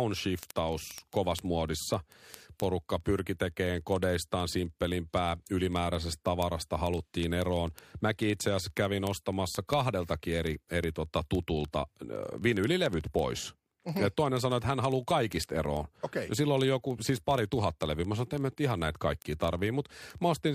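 Sharp ticks of uneven strength run through the speech from 0.1 s to 20.55 s, roughly 25 per second. These are word clock ticks: the receiver runs unlocked, about 700 ppm off, dropping or repeating single samples.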